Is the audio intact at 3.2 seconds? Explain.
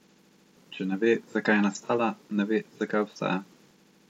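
Yes, the speech is intact at 3.2 seconds, with no dropout, click, distortion or other fault to be heard at that point.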